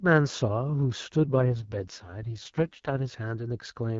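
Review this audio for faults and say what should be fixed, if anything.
An AMR rate drop runs from 1.24 to 3.14 s. The speech turns rough and synthetic, which fits a step down from 12.65 to 6.6 kbit/s. The spectrogram keeps its full band with no gap, but the harmonics blur into noise. A stronger, more stable radio link would keep the codec at its higher rate.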